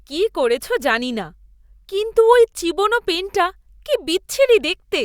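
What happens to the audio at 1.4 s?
Nothing goes wrong at 1.4 s; the speech carries on intact through that moment, with no dropout, click or distortion to be heard.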